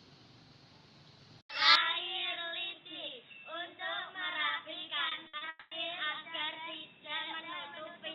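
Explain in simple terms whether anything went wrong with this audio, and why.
Three things went wrong. From 1.76 s the sound turns dull and quieter, cut off above 3.8 kHz, likely an input switched to a poorer device that passes a narrower band. Between 5.09 and 5.43 s, repeated packet loss (robotic sound) leaves four short holes, each patched by stretching the previous sound, so it turns choppy. From 5.49 to 5.73 s a long network dropout is the likely cause of a fading buzz filling the gap before the audio resumes with that part missing.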